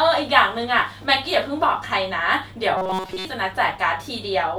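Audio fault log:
2.77–3.25 s: robotic sound from repeated short buffers. Speech becomes a rigid metallic buzz at 188 Hz, likely from a chunk of about 5.3 ms replayed while most real audio is skipped; spectrogram shows flat, evenly spaced harmonics, waveform an identical repeating cycle.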